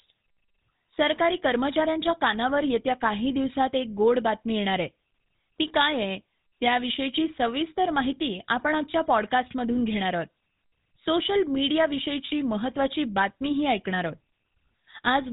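Throughout, the speech carries GSM full-rate codec damage: a buzzy, gravelly roughness from pulse-driven excitation, with nothing above 4 kHz, unlike cleaner narrowband codecs.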